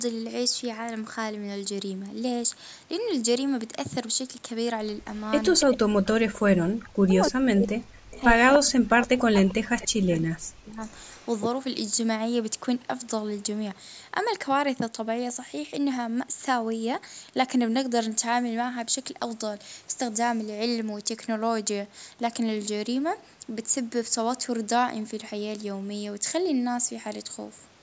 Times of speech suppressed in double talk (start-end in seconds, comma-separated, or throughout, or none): 5.66-10.83